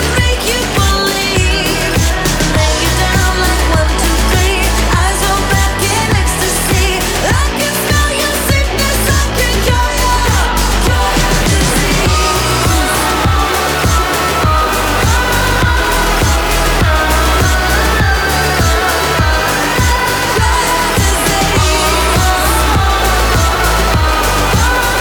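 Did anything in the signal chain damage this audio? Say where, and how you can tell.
No, nothing in the signal chain stood out as damaging on a careful listen.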